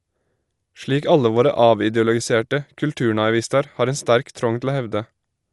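Throughout the speech the sound is dull and muffled, with nothing above 11.5 kHz, and a rough, fluttering grit clings to the voiced tones from start to finish. This plainly audible damage is likely Dolby Digital compression at a low bitrate, consistent with about 64 kbps. Short of bits, the encoder cut the top of the band and left many frequency lines without mantissa data, so the decoder filled those gaps with noise that rasps around each tone.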